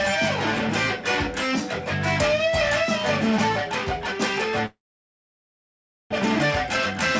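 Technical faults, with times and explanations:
4.66–6.14 s, long network dropout: the sound breaks off into a brief fading buzz, then about 1.35 s of near-silence before returning with roughly 1.1 s of material gone. This is likely packets failing to arrive, with the receiver briefly extending the last sound before giving up.
6.46–7.15 s, jitter buffer speed-up: the returning audio plays at 105% speed with unchanged pitch, sounding slightly hurried. After the gap the buffer held excess delay, so the receiver trimmed tiny pitch-period slices, around 40 ms in total, to catch up.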